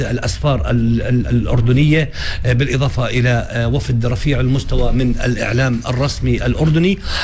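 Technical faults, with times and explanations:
No technical faults are audible anywhere in the clip.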